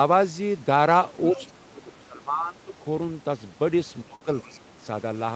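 From 1.31 to 2.73 s the talker's speech sinks and thins in patches, dipping by as much as about 20 dB and losing its upper range over roughly one and a half seconds in total. This is speech suppressed in double talk. Both ends were likely talking at once, and the echo canceller, unable to tell the talker apart from the loudspeaker echo, pulled the whole microphone signal down.

Inside that stretch, between 1.38 and 1.51 s, a faint second voice is audible, sitting around 20 dB below the talker. This is the other side's voice leaking through. The far end was likely played on the talker's loudspeaker, and the canceller failed to strip all of it from the microphone pickup.

The same suppression returns from 4.04 to 4.82 s, more severe this time. The talker drops by up to about 25 dB for around half a second in total, again ducking and dulling as the canceller clamps down on what it takes for echo.

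Within that dip, from 4.15 to 4.24 s, a sound is held unnaturally long with a slight buzz or dip. This is a short stall from a late packet. The jitter buffer ran dry, and the receiver stretched the last audio for about 57 ms until the packet arrived. Playback then resumed where it had left off, so nothing is lost, but everything after that point runs about 57 ms later. Throughout the clip the top end stops near 8 kHz, as expected for this call path.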